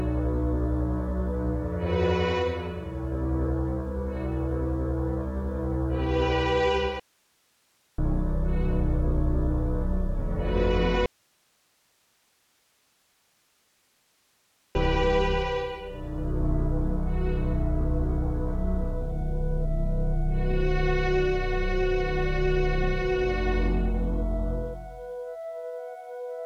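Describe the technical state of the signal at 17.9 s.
Nothing goes wrong at 17.9 s, and the signal is intact at that point.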